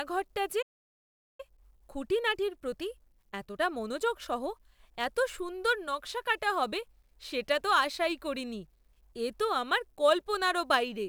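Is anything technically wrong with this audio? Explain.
Yes. From 0.62 to 1.40 s the speech halts in a playback stall, going silent for about 0.77 s before resuming. The likely cause is the player running out of buffered data or its thread being blocked.

From 1.40 to 4.40 s comes time-compressed catch-up. The player trims small pieces and cross-fades the joins to clear its backlog, so the speech runs about 1.1 times faster at unchanged pitch, unlike a resampling speed-up, which would raise pitch.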